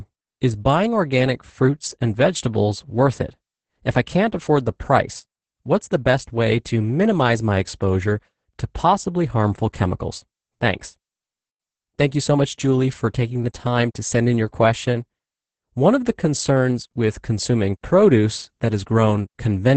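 Opus voice compression runs throughout: the SILK coder's coarse excitation leaves the speech muffled, hoarse and faintly robotic, fitting roughly 10 kbps; spectrograms show nothing above 8.7 kHz.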